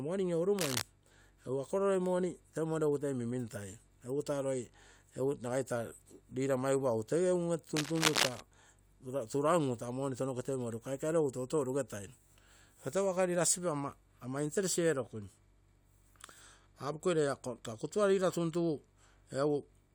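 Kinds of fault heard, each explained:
Cable scratch noise: dense, uneven scratching over the speech at 0.59–0.82 s and, louder, 7.77–8.40 s, likely from a worn cable or connector being moved.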